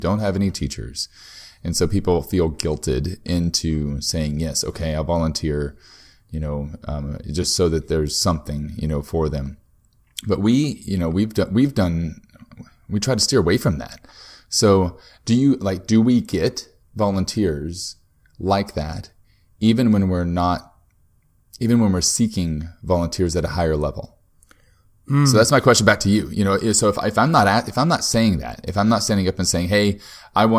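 No technical faults can be heard anywhere in this recording.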